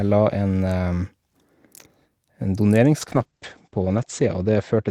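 At 3.03 s a call bitrate drop sets in and lasts to the end. The encoder's rate falls from 40 to 11 kbps, sitting at its lowest for 1.25 s, and the audio bandwidth shrinks from 20 kHz to 8 kHz. The sound turns coarse, watery and muffled, and a spectrogram shows everything above 8 kHz abruptly gone.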